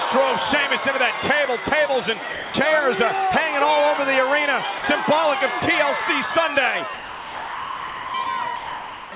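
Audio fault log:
2.32–2.54 s, 4.78–4.84 s, 5.60 s, 6.94–8.14 s, 8.24 s, 8.56–9.12 s: sound dropped by the voice detector. The sender's detector likely mistook the sound for background and stopped transmitting, so the receiver substituted comfort noise. The audio gives way to steady hiss, capped near 4 kHz by the call path, for 20 ms up to 1.2 s, then returns.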